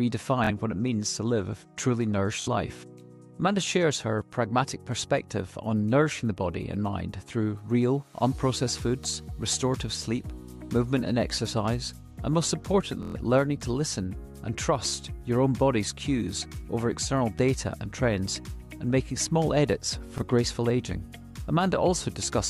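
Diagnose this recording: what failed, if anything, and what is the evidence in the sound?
The failure is a Bluetooth stutter on the wireless link to the playback device. At 0.44–0.51 s, 2.42–2.48 s, 13.03–13.16 s and 20.18–20.22 s, a short slice of about 23 ms repeats, buzzing for roughly 46, 46, 116 and 23 ms, which points to two, two, five and one lost packets. The receiver replayed its last buffer until data arrived, so the audio then resumes ahead of where it paused. Plain dropouts would go silent instead of repeating.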